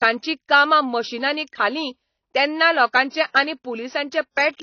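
From start to end, the speech is dull, with nothing above 6.6 kHz. Coding damage is plainly audible throughout. This points to AAC compression, likely AAC-LC at a low bitrate near 24 kbps. The encoder discarded the top band to save bits.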